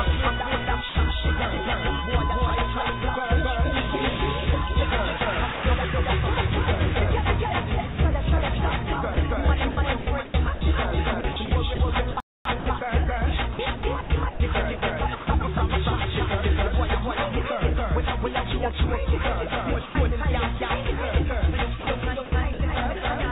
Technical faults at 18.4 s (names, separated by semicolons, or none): doubled audio track